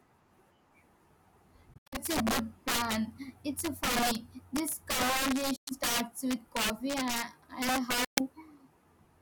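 Integer overflow runs through the whole of this speech recording. The level is pushed about 10 dB past the integer limit, so on roughly one sample in twenty the loudest peaks wrap around to the opposite sign instead of being held at full scale. Each wrapped peak swings across the entire range, producing sharp, violent cracks on the louder syllables that sound far harsher than ordinary clipping. Bluetooth dropouts are the likely cause of three short gaps. The first, from 1.74 to 1.99 s, is a cluster of holes totalling about 137 ms spread over about 183 ms, with the longest single silence around 76 ms. The others run from 5.56 to 5.71 s, losing about 107 ms, and from 8.04 to 8.20 s, losing about 122 ms. In each case the output cuts out, which fits packets failing to reach the headphones in time. When sound resumes, the speech has moved on, as if it had kept playing through the silence.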